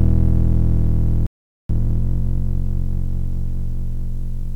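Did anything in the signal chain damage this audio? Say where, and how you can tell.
Yes. A playback stall at the buffer stage: the music drops to silence from 1.27 to 1.69 s, likely because the player's buffer ran dry or its thread blocked.

Time-compressed catch-up follows at playback, from 1.69 to 4.55 s: the music runs 1.1 times fast at unchanged pitch, as small pieces are cut out and cross-faded.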